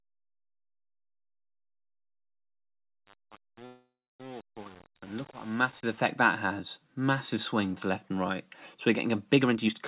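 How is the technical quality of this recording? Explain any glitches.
The recording has three audible glitches, two of them in the first six seconds and one near the end. The whole clip has the narrow, telephone-like sound of a call link, with nothing above 4 kHz.

Truncation distortion on a fade, 0.0 to 5.97 s: During the fade, the volume stage drops low-order bits without dither, and the result fits a stage keeping only 7 bits. Near silence the waveform collapses into coarse square steps, so the quiet end of the fade sounds gritty.

Call audio freeze, 3.66 to 4.20 s: The likely cause is packets stalling in transit so the jitter buffer ran dry. The receiver stretches the last sound into a fading buzz or hiss, then about 300 ms of silence, which inserts a 534 ms gap. Playback resumes where it stopped, with nothing lost.

Jitter buffer speed-up, 9.33 to 9.74 s: With too much audio queued, the receiver repeatedly cuts short pitch-period slices, roughly 200 ms in total. 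The sound runs at 144% speed with unchanged pitch, so this stretch comes across as noticeably hurried.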